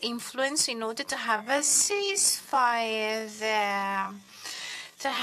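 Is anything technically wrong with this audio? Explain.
Yes. From 1.30 s to the end at 5.23 s, a time-stretched section sets in: software likely slowed the audio to about 0.52 times its speed, repeating short pieces to hold pitch. The pace abruptly halves while pitch stays put, leaving the sound dragging.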